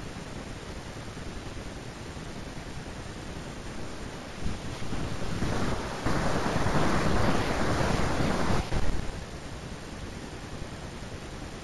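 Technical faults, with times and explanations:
Throughout, imaging from linear upsampling: straight-line interpolation from 16 kHz to 44.1 kHz mirrors the spectrum into 8–16 kHz, showing on a spectrogram as a faint band roughly 25 dB down that adds metallic shimmer to sibilants.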